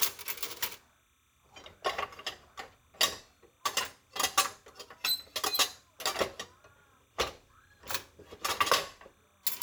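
A faint, steady chirping warble around 1 and 2 kHz sits far beneath the sounds throughout: timecode bleed, with linear timecode, likely 29.97-frame code, leaking into the audio path.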